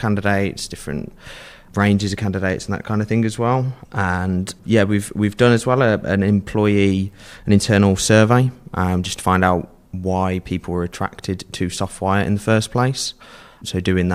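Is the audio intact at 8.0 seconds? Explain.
Yes, the speech at 8.0 seconds plays through cleanly, with no dropout, click, distortion or other fault audible at that point.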